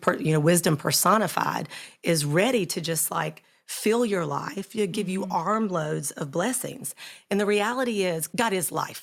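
At 0.07 to 0.09 s there is a brief microphone overload. The loudest peak of the speech flattens at its top for about 3 dB beyond the converter's limit, and roughly 2 percent of the samples in that span are squared off. The result is a short, harsh crackle on the loudest syllable rather than a clean transient. The likely cause is input gain set high enough that the converter ran out of headroom and truncated the waveform.

At 1.14 s the whole signal, speech and background together, drops in level by about 3 dB in a single step. There is no fade, just an abrupt loss of loudness. A second step of about 2 dB follows at 2.58 s and sounds the same way. The two discrete, stacked reductions are consistent with the microphone volume being stepped down. The likely cause is the call software reacting to the earlier overload by lowering the device's input volume in increments.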